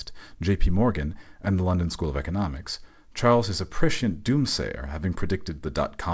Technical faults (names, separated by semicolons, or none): none